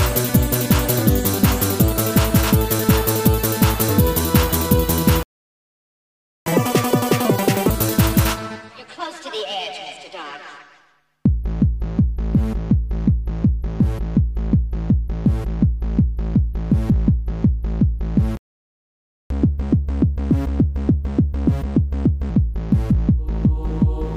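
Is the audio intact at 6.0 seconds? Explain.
No. A playback stall silences the sound from 5.23 to 6.46 s, about 1.23 s. The player likely ran out of data before resuming.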